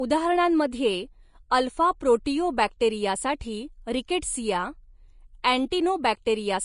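Speech, with low-bitrate Vorbis compression throughout. Nothing sounds above about 10.5 kHz. The treble is hissy and grainy, and consonant attacks are smeared. The likely cause is Vorbis coding at a low bitrate, near 32 kbps, replacing fine high-frequency detail with noise.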